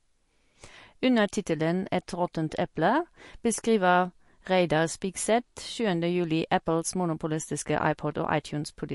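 Speech clip with plainly audible codec damage throughout, likely MP3 compression at a low bitrate near 48 kbps. Nothing sounds above 11.2 kHz, and weak frequency detail flickers watery on and off, which a simple low-pass filter wouldn't cause.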